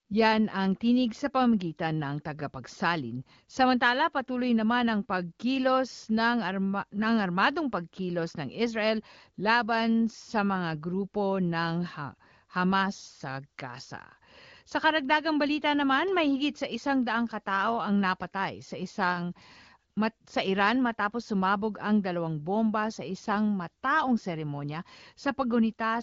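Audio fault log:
No fault to log for this audio.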